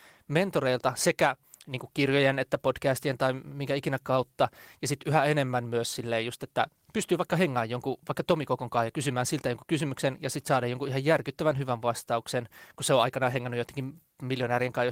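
At 8.87 to 8.89 s, 11.49 to 11.59 s and 13.33 to 13.35 s, lost packets were rebuilt from error correction. The decoder played low-bitrate backup copies, so there are no gaps, just brief rough, noisy patches. The middle one lasts about 60 ms, which fits three lost packets.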